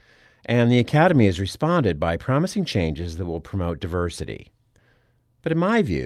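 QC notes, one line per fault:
No faults detected.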